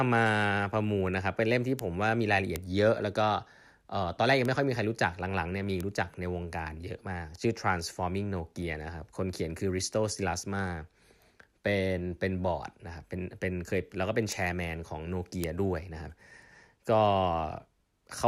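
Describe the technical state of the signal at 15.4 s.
A bit error spike at 15.44 s: a single flipped bit throws one sample to about -7 dBFS, heard as a sharp broadband tick unrelated to the speech.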